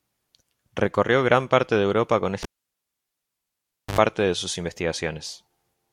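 A cable pulled and plugged in interrupts this speech recording from 2.43 s to 3.99 s. A sharp pop at 2.43 s marks the live connector being yanked out, after which the signal drops to near silence for about 1.51 s. As the plug goes back in, the tip makes contact before the ground sleeve, so an ungrounded conductor briefly picks up 50 Hz mains hum, heard as an 80 ms buzz, before a second pop at 3.99 s restores the sound.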